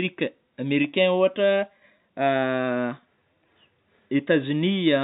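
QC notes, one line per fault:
Nothing to flag on this one; the speech just sits in the narrow telephone band you'd expect from G.711 coding.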